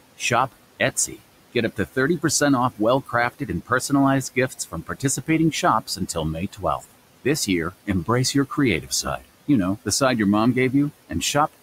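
Noise suppressor artifacts run through the whole clip. The room noise, sitting about 19 dB below the speech, is pulled down by about 17 dB in gaps and lifts back under speech.

The noise suppressor also cuts speech in five spans: 1.54–2.24 s, 2.76–3.92 s, 4.35–6.17 s, 6.53–6.85 s and 7.24–9.49 s. It misreads quiet speech as noise and attenuates brief fragments by about 14–17 dB. Consonants and endings sound swallowed for roughly a tenth to almost half a second per span.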